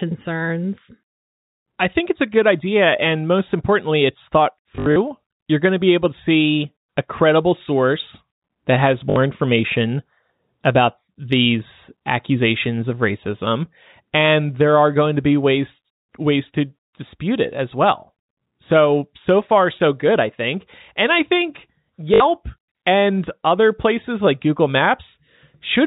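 Right after "most importantly it's thought", from 4.76 to 4.96 s, there's packet loss with the last packet repeated: scattered dropouts get patched by replaying old audio, giving a buzzy stutter. It recurs at 9.10–9.16 s before "information about these accusations" and at 22.14–22.20 s after "I think", each gap fitting about three 20 ms packets, all over band-limited G.711 telephone audio.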